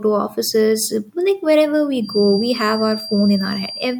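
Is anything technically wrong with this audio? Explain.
Yes. From 2.0 s to the end of the speech clip there is a feedback whistle. The likely cause is a loudspeaker-to-microphone loop poised right at the edge of feedback, so a single frequency keeps circulating without building into a full howl. What you hear is a thin, steady tone near 4.7 kHz sitting behind the speech, some 15 dB beneath it, its level slowly swelling and fading rather than holding perfectly still.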